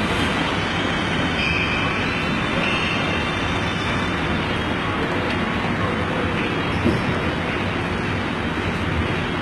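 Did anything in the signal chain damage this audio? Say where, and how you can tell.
Yes: throughout, the treble sounds gritty and metallic and stops dead at 11.8 kHz, likely HE-AAC compression at about 16 kbps, rebuilding the highs from copied lower bands.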